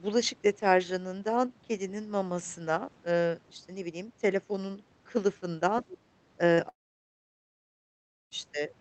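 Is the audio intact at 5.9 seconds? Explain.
No, from 5.78 to 5.97 s the other side's voice is leaking through, a faint second voice about 20 dB down, likely echo the canceller left in.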